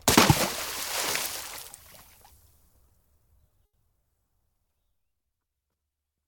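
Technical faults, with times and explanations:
1.11 to 1.15 s, short concealed packet loss: about 20 ms of audio failed to reach the decoder in time. The receiver bridged the gap by extending the preceding sound and then blended back into the real signal, leaving a brief smear where those 20 ms are missing.
3.65 to 3.75 s, burst of packet loss: a run of packets was lost or arrived too late, leaving an 80 ms hole. The receiver continued the last sound and faded it down across the gap, then resumed with 80 ms of audio missing.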